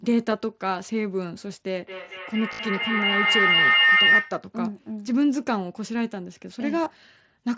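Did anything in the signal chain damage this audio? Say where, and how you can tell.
Yes. Feedback howl, 1.8 to 4.46 s: an acoustic loop between two devices in the same room, from loudspeaker back into microphone, gains level on each trip. It settles into a tone around 2 kHz, peaking about 6 dB above the speech, with the loop repeating roughly every 200 ms.

Concealed Bluetooth headset packet loss, 2.52 to 2.59 s and 6.84 to 6.86 s: on the headset link, lost packets are patched by repeating the last matching waveform. The first burst, with a 60 ms run, sounds like a held buzzy tone. The second loses 15 ms.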